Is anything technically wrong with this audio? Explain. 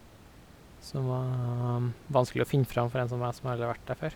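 No, the signal shows no technical problems, and the only thing under the speech is the room's own background noise, sitting about 23 dB below it as part of the original recording.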